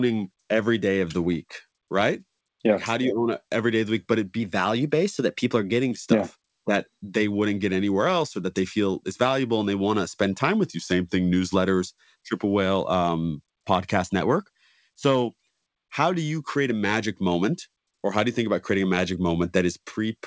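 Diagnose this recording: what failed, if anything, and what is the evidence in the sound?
A likely drift correction step in the buffer stage at 4.40–5.91 s (after "the week but it"), 10.65–11.55 s (after "want to spend time") and 14.21–14.95 s (after "um podcast"). Playback jumps about 6.4% faster, slower, then faster, shifting pitch by about a semitone before snapping back.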